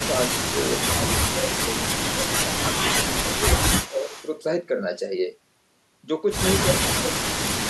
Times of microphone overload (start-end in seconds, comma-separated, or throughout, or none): none